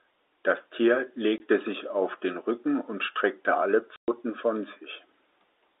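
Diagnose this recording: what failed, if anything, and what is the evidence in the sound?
Packet loss filled with silence, at the network stage. The speech drops to dead silence from 1.38 to 1.40 s and from 3.96 to 4.08 s. The 20 ms and 120 ms gaps fit one and six lost 20 ms packets. Silence replaced them, so each hole has hard edges.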